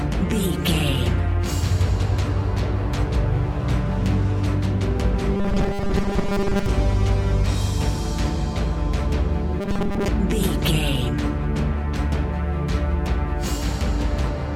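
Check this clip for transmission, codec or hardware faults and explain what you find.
Robotic sound from repeated short buffers appears twice, from 5.37 to 6.66 s and from 9.61 to 10.09 s. Both stretches turn into a rigid, metallic buzz fixed at 200 Hz that still loosely tracks the sound's contour. The likely cause is audio arriving too seldom, with playback filling the gaps by looping the last 5 ms block. Most of each stretch is this repeated material rather than new audio.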